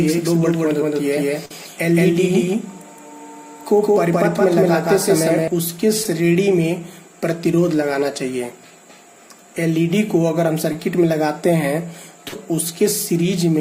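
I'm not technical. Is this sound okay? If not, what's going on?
No. There are three kinds of fault.

From the very start until 5.48 s, you hear a doubled audio track. The same sound plays twice, with a second copy about as loud as the first, roughly 150 ms behind it. That gives a close echo with no room feel. It is likely that the sound was picked up a second time by a slower route, or that an edit left two copies out of step. At 5.48 s the copy stops abruptly.

At 1.45 s there is a burst of packet loss. For about 50 ms, pieces of the sound never arrived. The receiver filled the gap by carrying the last sound on and letting it fade. Then the audio picks up again a little further along. The part in between, also about 50 ms, is simply gone.

There are short concealed packet losses at 6.03 s, 10.73 s and 12.28 s. Each is a tiny gap of a few hundredths of a second. The receiver patched each one by stretching the last sound and then blending back in. 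The one at 12.28 s is the longest, about 40 ms. Each sounds like a brief smear or wobble, and a very short sound inside one can disappear.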